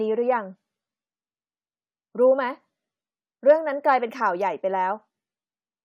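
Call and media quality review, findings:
Nothing to flag on this speech recording; no problems turned up anywhere in it.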